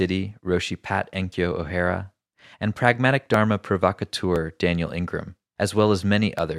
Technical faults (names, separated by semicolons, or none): periodic USB or driver dropouts